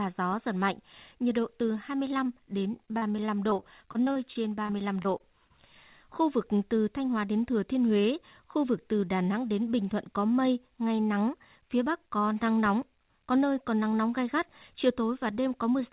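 Speech recorded over a call link, band-limited with nothing above 4 kHz, consistent with a narrowband telephone codec such as G.711. From 2.72 to 5.51 s the voice turns choppy and robotic, with small pieces dropping out. This is repeated packet loss: some two dozen short holes, the longest about 39 ms, each papered over by stretching the previous sound, so roughly 15% of that stretch is concealment rather than real audio.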